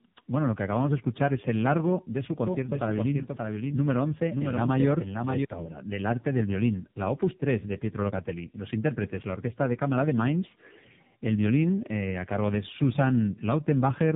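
From the start, the speech carries tandem speech coding. It sounds like it crossed several links, each with its own speech coder. The roughness and warble point to about three speech coders in a row, ending in something like AMR-NB. Each one re-encoded the last one's damaged output, so the errors stacked up. Nothing is left above 3.7 kHz. The result is muffled, grainy and watery throughout.

From 2.47 s to 5.45 s there is a doubled audio track. It begins just after "el largo de su" and stops before "obra del arte del". A second full-band copy trails about half a second behind and sits roughly 5 dB lower. It has no decay and no room tone. It cuts in and out abruptly. The likely cause is a second, slower capture path or an edit that left two offset copies.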